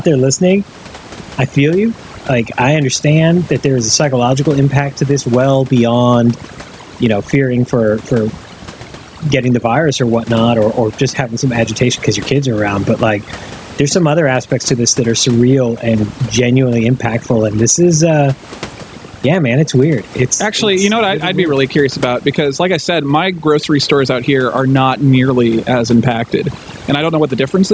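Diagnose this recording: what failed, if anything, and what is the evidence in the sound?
Overdone noise removal runs through the whole clip, in the call processing stage. The room noise, sitting about 31 dB under the speech, gets chewed into twinkly, warbling specks because bands near the noise estimate are being pushed down or switched off.

Gain pumping also runs throughout. The level keeps swinging by something like 15 dB, pulling down on loud moments and rising back in between, so everything feels squashed. The likely cause is gain set too high for the mic, with a fast limiter clamping each loud sound.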